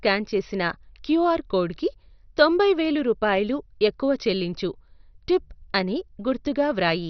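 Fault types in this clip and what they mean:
MP2 compression: the speech was likely run through an MPEG Layer II encoder short of bits, so upper sub-bands are switched off and the rest coarsely quantised. Nothing survives above 6.1 kHz, leaving a dull sound with heavy gurgling, granular distortion that fits a rate near 48 kbps.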